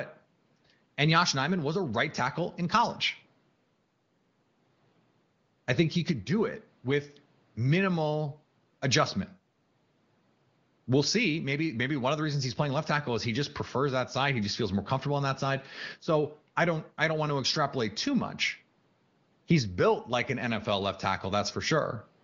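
No technical faults are audible.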